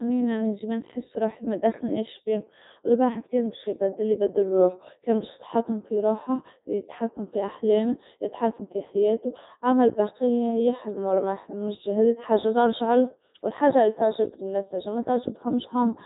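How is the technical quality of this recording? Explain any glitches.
Technical quality is poor: the whole speech recording has passed through a Codec 2 vocoder, and the damage is heavy throughout. Rather than preserving the waveform, the codec transmits only pitch, voicing, energy and a coarse spectral envelope, then rebuilds the voice from sine waves. The result is a robotic, buzzy timbre with no content above 3.8 kHz. The density of detail that survives points to its top mode, around 3.2 kbit/s.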